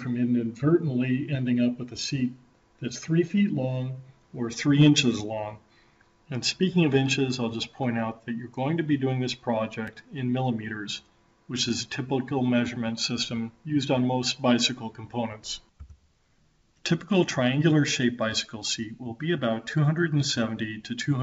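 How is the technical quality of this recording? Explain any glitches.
The technical quality is compromised by steady timing faults and one brief dropout. The audio passed through a G.722 call path at 64 kbps, which leaves nothing above 8 kHz on a spectrogram.

Clock drift between sender and receiver runs through the whole clip. The sender's clock runs roughly 3% slow relative to the receiver's, so the jitter buffer keeps draining and the receiver must stretch the audio. On a spectrogram, events arrive progressively later than their original timing would place them.

Repeated timing corrections span from 0.47 s to 21.1 s, playing the sound at 97% speed. The receiver repeats short pieces to cover the slow sender, adding roughly 0.7 s in total. These edits are small and unevenly spaced. A waveform shows tiny duplicated segments at irregular points.

A block of digital silence occurs at 9.87 s and lasts 2.63 ms. 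The sound cut out and back with no fade. It is heard as a tick. The waveform shows a flat line with sharp edges, and the spectrogram shows a thin vertical broadband click.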